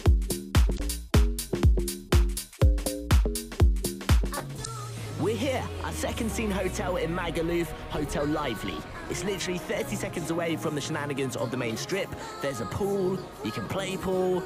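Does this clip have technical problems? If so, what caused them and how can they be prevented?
Yes. Two short bursts of damaged data in a compressed stream occur, at 0.75 to 0.80 s and 4.61 to 4.67 s, lasting about 50 and 56 ms. Corrupted bytes made the decoder misread those frames and lose sync until it found the next valid frame header, producing a brief chirp or blip. A spectrogram shows a narrow vertical smear of scrambled energy, and the waveform shows an abrupt discontinuity. Checksummed transfer and a reliable transport prevent this.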